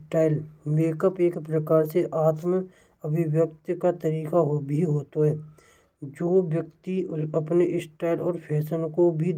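No technical faults turn up anywhere in this speech recording. Nothing in it calls for a timestamp or a correction.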